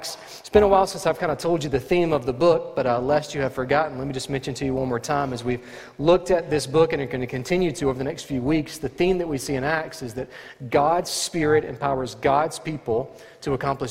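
From start to finish, the sound carries overlap-add ripple. Windowed frames were rejoined with an overlap that doesn't sum to constant gain. Level dips and recovers by about 6 dB each frame, around 300 times a second. It sounds like a metallic buzz with extra tones around each note.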